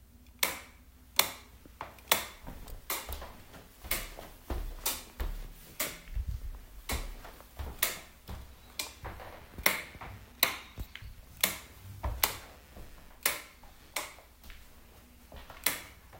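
From 9.21 to 13.91 s, a faint buzz pulses about 150 times a second: computer activity noise, with computer load shifting the shared ground.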